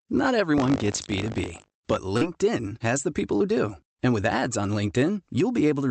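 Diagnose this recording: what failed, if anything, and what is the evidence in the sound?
Buffer tearing, 0.56 to 1.97 s, at the driver or buffer stage. A steady 50 Hz rattle rides on the speech, which fits a 20 ms period. The writer and the reading hardware have slipped, so a small slice of each period, roughly 7 percent, replays audio from about 70 ms earlier, with hard joins on both sides.

Short concealed packet loss at 2.17 to 2.23 s and 3.37 to 3.42 s, on the network side of the call path. Each gap is a brief smear: about 40 ms failed to arrive, and the Opus decoder filled 35 ms and 30 ms respectively by extending the preceding sound before blending back into the real audio.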